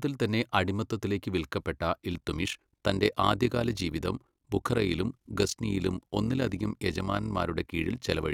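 From 2.14 s to the end of the clip, the speech carries an overlap-add ripple. The signal was split into windowed frames and rejoined with an overlap whose window gains do not add up to a flat total, so the level swells and dips by about 11 dB once per frame, at around 40 Hz. The result is a rough, buzzy flutter. Unlike a vibrato or pitch wobble, the pitch stays steady and only the loudness pulses. Unlike dropouts, the dips are perfectly regular and never fall to silence.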